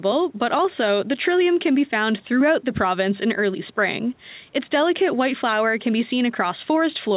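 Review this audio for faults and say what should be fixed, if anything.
Nothing here needs fixing: the speech comes through the call path as you'd expect, with the bass trimmed by the microphone's high-pass and nothing above 4 kHz, which fits a narrowband G.711 call codec.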